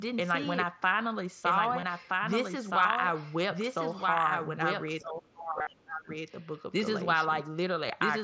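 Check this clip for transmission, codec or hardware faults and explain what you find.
Yes, there are a few faults here, all on the speech.

A doubled audio track runs throughout: a dry copy about 5 dB quieter trails about a second and a half behind, likely a second, slower capture path.

Concealed Bluetooth headset packet loss shows up at 1.80–1.83 s, 2.82–2.85 s, 5.59–5.67 s and 7.89 s. Dropped headset packets get patched with repeated recent waveform, so the runs sound like a brief buzzy tone before the real signal returns, while the single loss at 7.89 s is nearly hidden.

Speech is suppressed in double talk from 5.01 to 6.09 s, dipping deeply. It's likely the echo canceller turning down this side's voice along with the loudspeaker echo while the far end speaks.

The band stops at 8 kHz, which is just the mSBC wideband limit.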